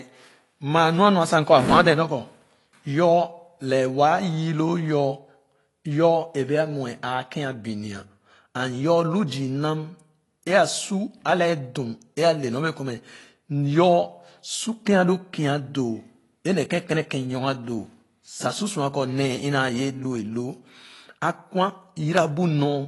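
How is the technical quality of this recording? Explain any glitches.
The speech is dull and smeared throughout, with a warbling, fizzy texture on sustained sounds and sibilants, and nothing above about 11.5 kHz. The likely cause is AAC compression, and the damage is plainly audible. The encoder spends few bits per frame, which fits a low bitrate of around 32 kbps. So it cuts the top of the spectrum and quantises the remaining bands coarsely. That leaves gaps and noisy fill that shimmer from frame to frame.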